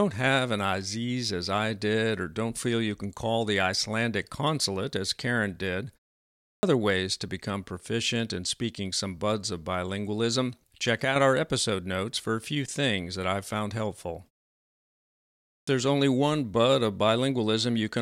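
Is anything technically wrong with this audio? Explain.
Yes. There is a clipped start after a pause, at 6.32 to 6.63 s and again at 15.37 to 15.67 s. During each silence, about 0.42 s and 1.15 s long respectively, the output path drops into a sleep state and takes roughly 0.3 s to wake and lock again. The first 310 ms and 304 ms of sound are swallowed, so "ways to become proficient" and "only one bud of" start abruptly out of silence, missing their opening sounds.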